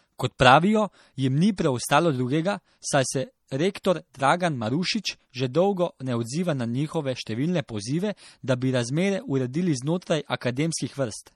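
Throughout, the speech sounds watery and swirly with a hard treble ceiling. This is likely MP3 compression at a low rate, consistent with about 48 kbps. A spectrogram shows a flat high-frequency cutoff and flickering gaps.

Pre-echo appears at 0.39 s before "pravijo jim ni preostalo", at 1.56–1.58 s between "pravijo jim ni" and "preostalo drugega saj se", and at 3.84 s. Codec noise leaks 13–20 ms ahead of each attack, showing as a smear before the onset.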